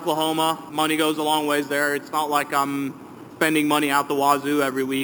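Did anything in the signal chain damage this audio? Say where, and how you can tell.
Yes, there is imaging from sample-and-hold upsampling at the sample-rate conversion stage, heard throughout as a bright metallic fizz that tracks the sound's level. The audio went from 12 kHz to 48 kHz by repeating samples unfiltered, so mirrored spectra appear, the lowest between 6 and 12 kHz at about -16 dB, moving opposite to the pitch.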